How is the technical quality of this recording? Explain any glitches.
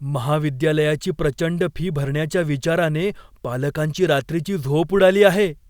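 Nothing in this recording stood out as a problem on listening, so there are no glitches to explain.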